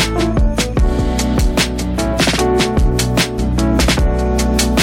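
No technical faults can be heard anywhere in this clip.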